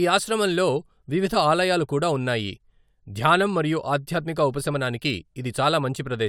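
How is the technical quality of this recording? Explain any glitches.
No technical problems can be heard in this recording.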